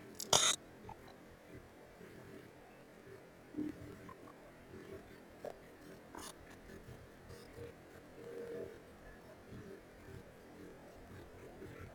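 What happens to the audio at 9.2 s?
At 9.2 s the speech still suffers from planar audio read as interleaved, which runs through the whole clip. Each 46 ms block, which fits 2048-sample planar blocks, plays its left half and then its right half at double speed. The voice sounds an octave high with a 21.5 Hz flutter. A spectrogram shows harmonics spaced twice as widely, and the waveform has seams repeating every 46 ms.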